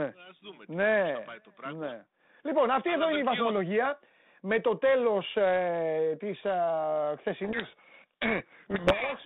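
From 7.44 s to the end at 9.25 s, the speech sinks under a harsh, grinding distortion that buries it. This is a codec payload misread: the two ends disagree on the bit order inside each G.726 code word, so the decoder takes each sample's difference value from scrambled bits and rebuilds the wrong waveform. Before that point the narrow telephone band, roughly 150 Hz to 3.7 kHz, and the light coding texture fit G.726 at 32 kbit/s.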